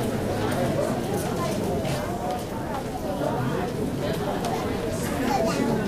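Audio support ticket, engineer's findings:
No faults found in the audio. Nothing heard points to a problem in any component of the chain.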